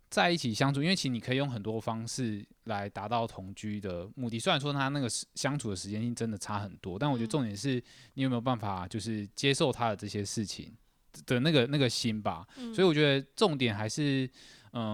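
No technical faults can be heard anywhere in this speech recording. The audio runs without dropouts, glitches or interruptions.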